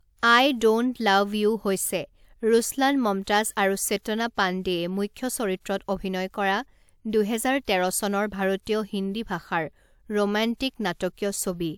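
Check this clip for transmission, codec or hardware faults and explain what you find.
Nothing faulty can be heard anywhere in this speech.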